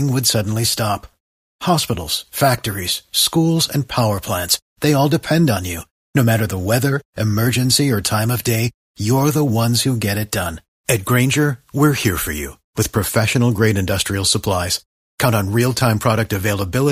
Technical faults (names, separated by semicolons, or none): none